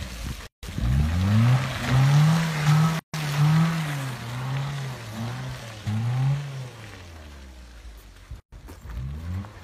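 Three gaps at joins of encoded pieces open at 0.47 s, 2.99 s and 8.40 s, lasting about 161, 144 and 123 ms. Each piece kept its encoder's start delay and padded final frame. The sound drops to silence with softened edges, then resumes where it stopped.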